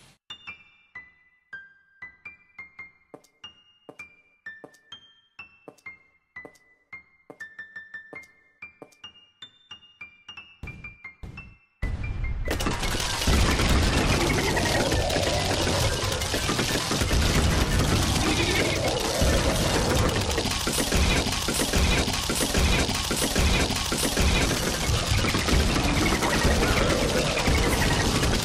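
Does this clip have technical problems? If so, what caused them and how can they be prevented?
Yes. A broken-record loop runs from 21.21 to 24.46 s: a fragment of about 812 ms repeats exactly four times, back to back. The likely cause is a stalled player, encoder or stream resending its last buffered piece, so the audio for that stretch is lost. Prevention means monitoring stream health and resetting stalled buffers instead of replaying them.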